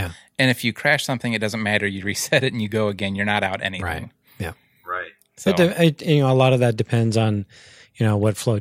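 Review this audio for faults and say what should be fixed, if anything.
Nothing here needs fixing; no faults come through anywhere in this speech recording.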